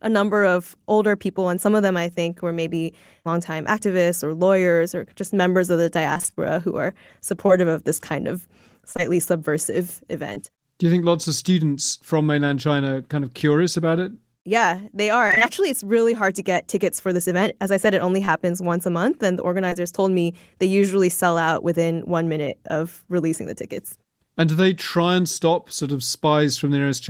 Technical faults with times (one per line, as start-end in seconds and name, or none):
6.13-10.38 scattered short gaps
15.28-15.42 repeated packet loss (robotic sound)
18.25-19.77 scattered short gaps